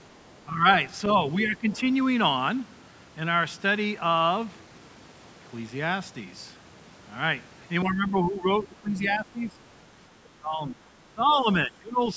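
Speech suppressed in double talk dips the voice briefly at 0.46–0.65 s, again at 1.35–1.68 s, then longer at 7.84–9.55 s, 10.39–11.47 s and 11.65–12.16 s, getting deeper toward the end, up to roughly 20 dB down. It's likely the echo canceller turning everything down while both sides talked. The other side's voice leaks through faintly at 1.04–1.14 s and 1.44–1.50 s, well below the talker, likely residual loudspeaker echo the canceller missed.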